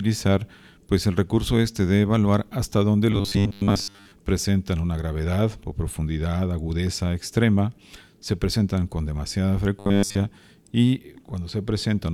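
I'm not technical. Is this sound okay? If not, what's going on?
No. From 3.12 to 4.12 s, right after "de evaluar hasta dónde", and again from 9.79 to 10.17 s, after "se presentan con demasiada", there's robotic sound from repeated short buffers. Tiny 10 ms chunks loop into a metallic 100 Hz buzz, likely because audio arrived too slowly.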